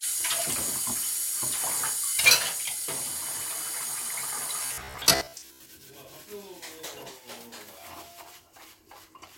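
From 4.63 to 5.71 s there's robotic sound from repeated short buffers, a rigid metallic buzz near 66.8 Hz, likely from a roughly 15 ms chunk replaying, with about half the audio lost.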